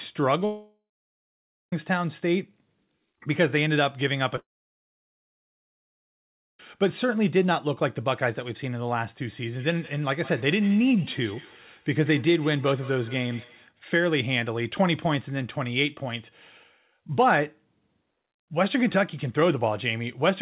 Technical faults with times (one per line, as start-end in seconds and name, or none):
0.45-1.73 long network dropout
4.36-4.38 short concealed packet loss
4.38-6.60 long network dropout
9.43-13.74 feedback echo between two devices